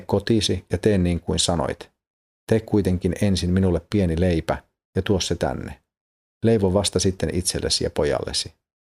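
No technical faults are audible.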